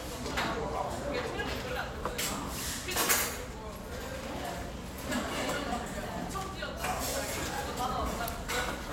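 Nothing goes wrong anywhere in this one, so there's no fault to point to at any moment.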